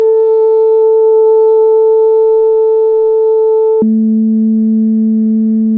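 From 3.82 s to the end, a wrong sample rate halves playback speed, dropping the music an octave, consistent with 32 kHz material played at 16 kHz; spectrogram harmonics fall to half height, waveform stretched.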